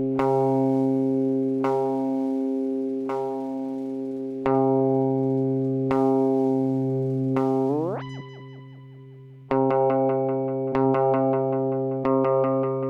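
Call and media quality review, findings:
No faults found in this recording. Nothing here calls for a ticket entry.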